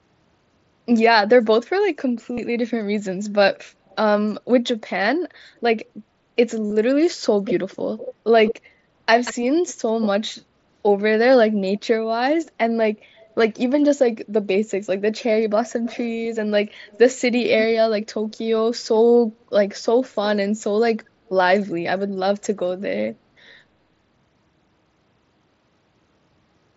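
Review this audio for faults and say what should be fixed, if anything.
Concealed Bluetooth headset packet loss at 2.34–2.39 s and 6.67–6.72 s. About 50 ms is replaced by a repeated buzzy fragment. Improve the headset's radio link.

Echo leak at 3.88–3.96 s, 7.45–10.31 s, 11.77–13.56 s, 15.7–18.36 s and 22.42–22.46 s. A copy trails by 184–212 ms, strongest at 7.45–10.31 s. It is likely residual loudspeaker echo. Strengthen the far end's echo cancellation.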